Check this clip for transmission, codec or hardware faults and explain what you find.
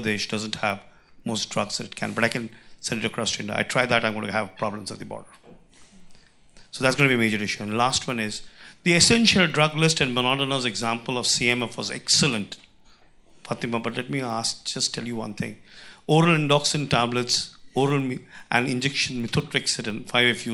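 A steady train of small ticks runs through the whole clip, ten per second, riding on the sound and vanishing wherever it falls silent. This is a resampler restarted on every block. The audio was converted in separate 100 ms chunks, which fits a step up from 24 kHz to 48 kHz, with the converter's filter state thrown away at each boundary. At every chunk edge it lacked the true neighbouring samples, so each seam carries a small error, heard as this 10 Hz ticking.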